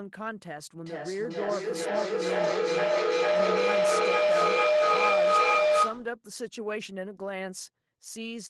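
From 0.82 to 6.14 s a ringing tone near 700 Hz swells to about 10 dB above the speech, pulsing roughly every 0.4 s: feedback howl from a microphone-loudspeaker loop gaining level each trip.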